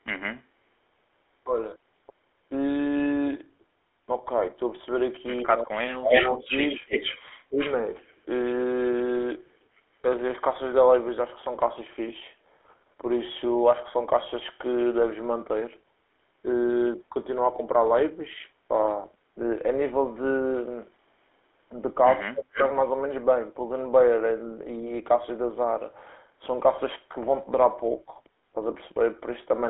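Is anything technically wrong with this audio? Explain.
Yes. The speech carries three kinds of fault.

Throughout the clip, the GSM full-rate codec leaves plainly audible damage. At about 13 kbps it models the vocal tract and excites it with a sparse, regularly spaced pulse train, so voiced sounds come out buzzy and gravelly. The band is confined to roughly 300 Hz to 3.5 kHz. Bandwidth loss alone would only sound muffled, and a modern wideband codec would sound smeared rather than rasping. This rough, pulsed texture is specific to this old codec.

Echo leak appears at 6.04 to 6.61 s, 7.6 to 7.75 s and 22.54 to 22.68 s. Each time a copy of the voice returns 280 ms late. In the first case it is about as loud as the direct speech, and in the later two it is about 10 dB down. A far-end loudspeaker echo that the canceller failed to remove is the likely cause. Room reverberation would trail off smoothly. 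These are discrete, fixed-delay repeats.

Speech suppressed in double talk occurs at 7.49 to 7.59 s and 22.23 to 22.59 s. The voice briefly sinks, by roughly 20 dB for about a tenth of a second in the first case, then by roughly 40 dB for about 0.3 s in the second. Each dip sits right beside an echo burst, which points to the canceller likely mistaking overlapping talk for echo and attenuating everything. A network dropout would leave silence or a glitch instead of this gain duck tied to the echo.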